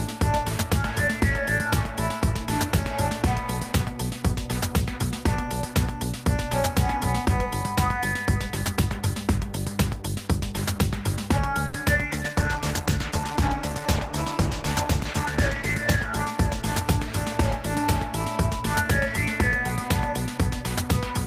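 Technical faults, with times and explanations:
11.67–11.75 s, short stall from a late packet: a packet arrived late and the jitter buffer emptied, so the receiver held the last sound for about 60 ms before resuming where it left off. Nothing is lost, but the waveform shows a repeated stretch with a slight buzz or dip and the spectrogram a brief smeared band.
12.11–18.86 s, call bitrate drop: the bandwidth estimate fell, pushing the encoder from 48 to 13 kbps, where it stayed lowest for about 3.5 s. Coarser coding makes the sound rough and muffled. On a spectrogram the upper frequencies go dark and patchy until recovery.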